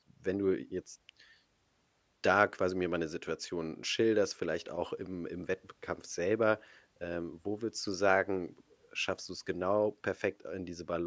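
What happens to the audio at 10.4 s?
Nothing goes wrong at 10.4 s; the speech carries on intact through that moment with no dropout, click or distortion.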